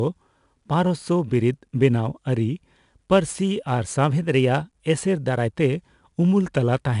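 Speech clip carrying 4-bit ADPCM compression throughout: each sample is coded as a coarse step from a running prediction, so a gritty hiss rides on every loud syllable and sharp onsets crunch. Nothing sounds above 10.6 kHz, which fits a low sample rate and roughly 89 kbps.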